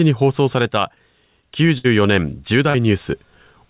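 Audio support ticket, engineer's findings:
Burst of packet loss, 1.78 to 1.86 s. The last sound is continued and fades over about 60 ms, then speech picks up further on with roughly 60 ms gone. Jitter buffer concealment on the receive side filled a run of lost or late packets.

Short concealed packet loss, 2.70 to 2.76 s. Brief smear or wobble, around 40 ms missing and about 37 ms of continued sound blended back in. The decoder's loss concealment papered over dropped packets. The band tops out at 4 kHz throughout, which fits a G.711 mu-law call path at 64 kbps.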